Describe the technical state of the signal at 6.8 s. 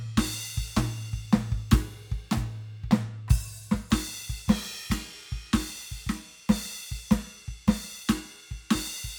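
At 6.8 s the music plays through intact, with no dropout, click, distortion or other fault audible at that point.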